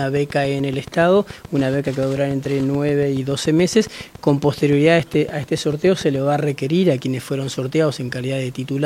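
Likely interference or a faulty connection injects a train of clicks from 0.03 to 6.2 s, about forty regular pulses at 7 per second, ticking as loud as the sound itself.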